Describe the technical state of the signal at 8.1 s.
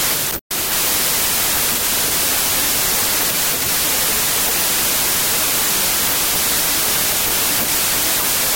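At 8.1 s the signal shows a wrong sample width fault, which runs through the whole clip rather than starting or ending near that point. Audio written as packed 24-bit integers is being read as 32-bit integers, so each value draws four bytes from three-byte frames and straddles sample boundaries. Only some values keep the true top bits. The result is loud noise with the speech buried underneath, playing about 1.33 times fast and raised in pitch.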